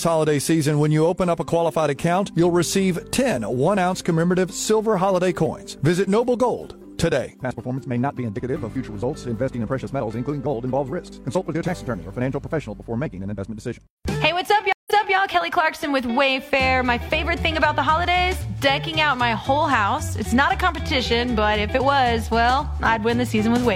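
At 14.73 s, a stream reconnect: the connection dropped and a new decoder started mid-stream, leaving 148 ms of silence before the audio resumes 279 ms earlier.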